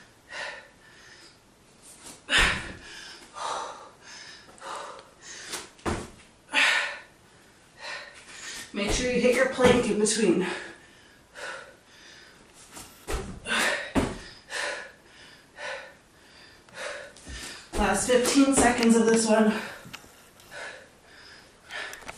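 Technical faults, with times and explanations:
throughout, MP2 compression: the sound is plainly dull and carries a gurgling, granular texture as upper bands drop in and out, likely from MPEG Layer II coding at a rate around 80 kbps. Too few bits force coarse quantisation of the remaining sub-bands, and it is steady across the clip rather than bursting.
11.61–11.78 s and 17.57–17.61 s, DAB burbling: short patches of noise blips sit in individual sub-bands. This points to reception bit errors slipping past error correction into the MP2 data at a low error rate. Unlike the constant compression dullness, these are isolated bursts.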